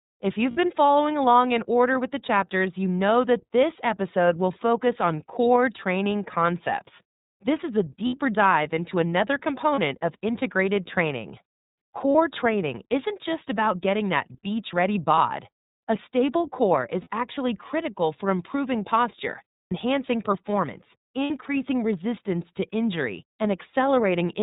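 Throughout, the speech has passed through the iLBC codec, a narrowband VoIP coder that models each frame's excitation on its own and discards everything above 4 kHz. The damage is plainly audible: the voice is intelligible but sounds dull, slightly rough and synthetic, with sibilants thinned out. The rate and framing fit iLBC's 13.33 kbps mode with 30 ms frames.

Packets then go missing in eight places: 0.51 s, 8.07 s, 9.75 s, 12.12 s, 15.14 s, 17.01 s, 19.63 s and 21.24 s. These are lost iLBC frames, and the decoder covers each gap by repeating the last pitch cycle blended with noise. Each gap lasts 30, 60 or 90 ms, consistent with whole 30 ms frames, and the longest is at 19.63 s. Each one is heard as a brief held, buzzy or breathy vowel, fading slightly in the longer ones, after which the voice snaps back cleanly because every frame decodes independently.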